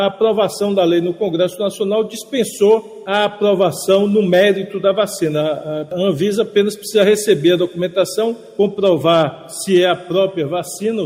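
No technical faults can be heard anywhere in the clip.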